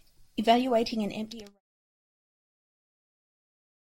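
Nothing stood out on listening to this speech, and the smooth fade out that finishes at 1.61 s is gradual, with no click or hard edge.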